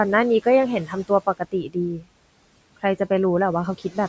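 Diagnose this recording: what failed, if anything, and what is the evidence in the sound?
The failure sits in the call processing stage, where the noise suppressor leaves audible noise suppressor artifacts across the whole clip. The room noise, which lies about 20 dB below the speech, is pulled down by about 18 dB in the gaps and swells back under each phrase. A codec at low bitrate smears the speech itself rather than pumping the background, and that sets this apart. The band stops at 8 kHz, as expected from call microphone processing.

The same suppressor also produces speech cut by the noise suppressor at 0.85 to 1.1 s, 1.26 to 1.76 s and 1.97 to 2.07 s. In each span parts of the speech, about 150, 200 and 100 ms, drop by about 17, 17 and 19 dB, so soft sounds come out swallowed. The gain rule took low-level speech for noise. Packet loss would instead leave hard gaps, clicks or repeated fragments. 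Here the timing stays intact and only the level sinks.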